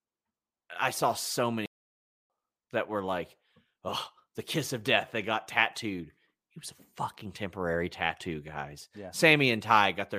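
At 1.66 s the speech cuts out mid-flow and stays silent until 2.30 s, a gap of about 0.64 s, before carrying on. This is a playback stall, most likely the player running short of buffered data or its output thread being blocked.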